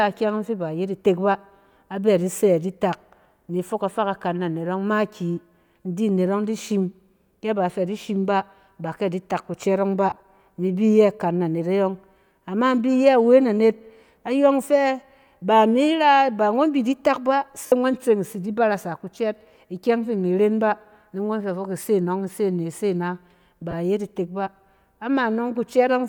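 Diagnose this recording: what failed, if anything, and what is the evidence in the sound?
The failure is at the wireless link: lost LE Audio frames in the Bluetooth stage, with the LC3 decoder concealing the gaps. At 10.10–10.20 s, about 70 ms of speech is replaced in short bursts spread over 100 ms, the longest around 30 ms. At 17.64–17.72 s, roughly 70 ms goes in one block, and at 23.71–23.74 s a brief 20 ms dropout occurs. In each spot, voiced sound smears into noisy hash as the decoder repeats the last spectrum with scrambled phase. The pattern fits dropped 10 ms frames. The light lossy compression does only slight damage.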